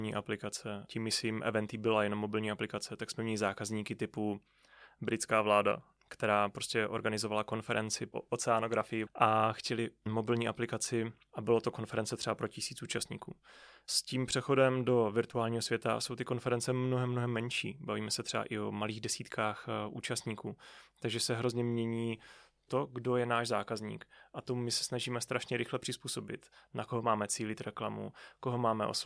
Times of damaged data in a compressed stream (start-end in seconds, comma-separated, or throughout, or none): none